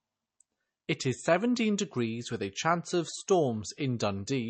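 Throughout, the speech sounds watery and swirly with nothing above 8.3 kHz, likely MP3 compression at a low bitrate, consistent with about 32 kbps.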